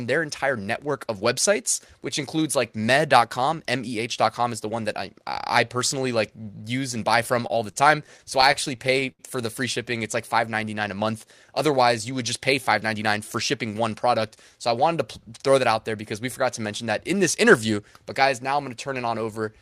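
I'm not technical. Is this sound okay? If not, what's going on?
No, there are two problems. From 7.47 to 9.21 s, after "use and buy from" and before "for the free", there are repeated stalls (stutter). The audio arrived over the network late and unevenly, and the player ran out of sound to play 13 times. Each time it stretched the last bit of sound to cover the wait, adding about 217 ms in total, with the longest pause 75 ms. Nothing is lost, but that stretch drags and stutters.

From 12.83 to 13.89 s, just after "you would just pay", there is a jitter buffer speed-up. The player had built up more waiting audio than it wanted, so it trimmed out many tiny slices, roughly 70 ms altogether. The pitch stays the same, but the speech runs about 7% faster and sounds hurried for that second.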